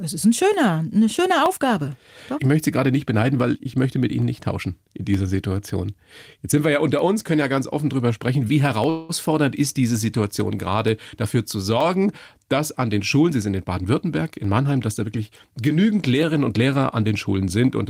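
A regular click runs through the speech from 0.54 s to the very end, recurring every 0.92 s. This is a clock drift buffer slip pattern. It is likely caused by two devices running on independent clocks that disagree by a few hundred parts per million. The buffer between them slowly drifts until a block of around fifteen samples is dropped or repeated. Each slip leaves a tiny discontinuity in the waveform, heard as the periodic tick.

From 8.89 to 9.11 s the sound stalls. The last moment is stretched into a fading buzzy tail lasting about 198 ms, and it never drops to silence. This is a call audio freeze. The likely cause is delayed packets emptying the jitter buffer, so the receiver extended what it last had. When the packets arrived, playback resumed where it stopped. Nothing was lost, but a gap was inserted and the overall delay grew by 198 ms.

Between 13.27 and 15.08 s the speech sounds hurried, running at about 111% speed while its pitch stays the same. 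This is a jitter buffer speed-up. Having built up more delay than it targets, the receiver trimmed many short pitch-period-sized pieces in succession, removing roughly a fifth of a second in total. The result is compressed timing rather than a change of pitch.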